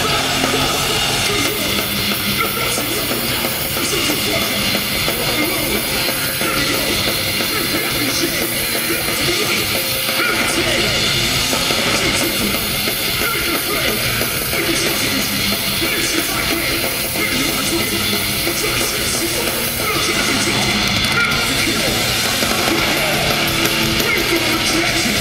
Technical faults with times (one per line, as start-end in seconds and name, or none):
0.00-25.21 doubled audio track